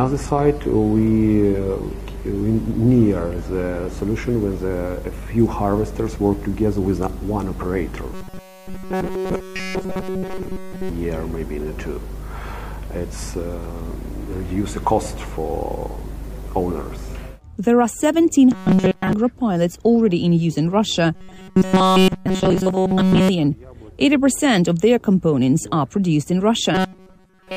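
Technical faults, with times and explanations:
0.00 to 4.00 s, adaptive stream starting at a low bitrate. The opening has missing or synthetic treble and heavier codec artefacts, which fits a 24 kbit/s HE-AAC start. At 4.00 s it jumps cleanly to a fuller version, consistent with 96 kbit/s AAC-LC, with no gap.
8.14 to 10.90 s, 18.52 to 19.13 s, 21.15 to 23.29 s and 26.75 to 27.56 s, robotic sound from repeated short buffers. The sound becomes a rigid metallic buzz at 188 Hz. This is likely one short chunk of about 5.3 ms replayed while new audio is late. The first, third and fourth runs are almost entirely repeats. The second is mostly repeats.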